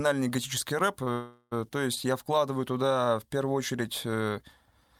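At 1.03 to 1.09 s, just after "готический рэп", a short stall from a late packet holds the sound for about 31 ms with a faint buzz or dip before it resumes, with nothing lost. At 1.13 to 1.53 s, before "то есть я", a call audio freeze stretches the sound into a fading buzz or hiss that ends in brief silence, likely from packets delayed in transit. It is longer than the stall, adds a gap of about 390 ms, and drops no audio.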